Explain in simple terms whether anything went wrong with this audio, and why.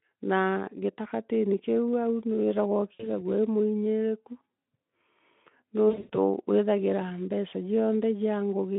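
Yes, two short dropouts. This is VoIP packet loss concealed by the speech codec: around 2.93 to 3.09 s, then worse from 5.89 to 6.10 s. The decoder guessed to fill the gaps, up to 100 ms at once, so the speech smears into a fading buzz.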